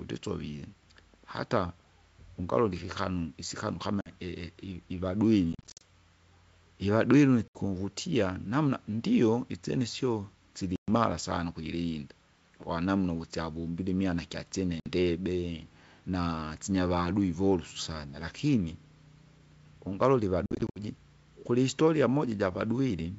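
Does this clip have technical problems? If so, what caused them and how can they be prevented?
Yes. Packet loss on an ADPCM call breaks the speech at 4.01 s after "ungalole ikikanu isikanu kama", 5.53 to 5.83 s, 7.48 s, 10.76 s before "sana ukujirinda kwanamna uvusiavombile", 14.80 s, and 20.46 to 20.79 s. Each break is silent and hard-edged, losing 50 to 180 ms in all, and the two longer spans are scattered dropouts. The decoder's predictor and step size lose sync, so speech returns slightly distorted before settling. Use jitter buffering, redundancy or loss concealment to prevent it.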